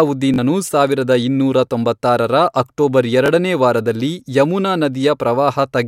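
At 0.34 s the speech hits a repeated buffer. The next chunk of audio didn't arrive in time, so the device played the last one again, here twice more, giving a quick buzzy stutter through 0.38 s with hard joins that fit a 20 ms buffer. The same thing happens once at 3.26 s, a shorter click-like hiccup. Both times, a few tens of milliseconds of real speech just go missing.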